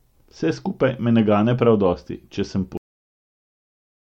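At 2.77 s, right after "prav dosti če sem", there's a cut-off end. The final buffers never got written, so the speech stops mid-sound and drops straight to digital silence.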